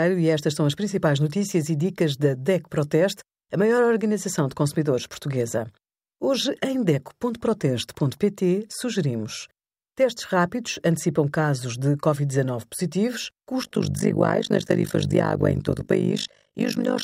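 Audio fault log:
13.62–17.03 s, overlap-add ripple: the speech's level swells and collapses once per frame, around 50 times a second, with dips of about 60 dB, because overlapping windows fail to sum to constant gain. It sounds like a harsh robotic flutter; the waveform shows a regular comb-like envelope, and the spectrogram shows dense vertical banding.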